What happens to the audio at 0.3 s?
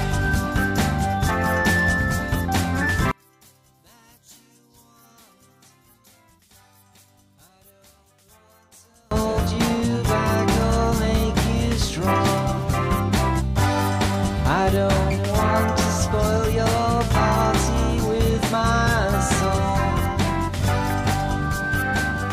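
Nothing goes wrong at 0.3 s; the audio passes through that moment intact, with no dropout, click or other fault.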